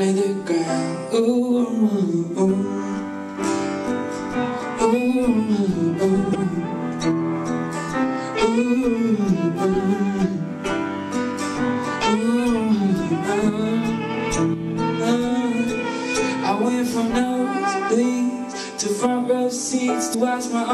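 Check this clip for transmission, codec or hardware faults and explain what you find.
Two short faults of one kind turn up, both damaged data in a compressed stream. A brief glitch cuts into the sound from 6.31 to 6.36 s, and again from 20.10 to 20.15 s, each lasting roughly 44 ms. Both times, corrupted bytes in the encoded stream meant the decoder could not read those frames properly. It lost sync and hunted for the next valid frame header, and that brief misdecoding produced the glitch.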